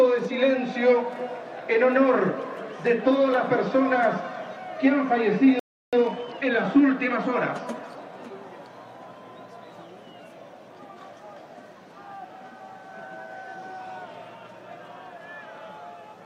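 At 5.59 s the sound cuts off mid-flow and stays silent for about 333 ms, until 5.93 s. This playback stall was likely the player running short of buffered data or being held up. On the waveform it shows as a flat line, and on the spectrogram as a blank vertical band.

From 5.93 s to 6.59 s a time-compressed catch-up follows. The player trims small slices of the backlog and cross-fades the joins, so the audio runs about 1.5 times fast at unchanged pitch. On the spectrogram the harmonics keep their height while events crowd closer together, with smearing at the splices.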